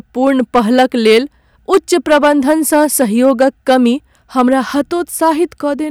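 From start to finish, some stage in the chain is being driven about 7 dB beyond what it can pass, so the speech waveform runs into its ceiling and the peaks are sheared flat. This is hard clipping. Only a small share of the samples, around 3 percent, hit the limit, but each flattened top adds harsh high harmonics. The result is a gritty crackle riding on the louder syllables throughout the clip.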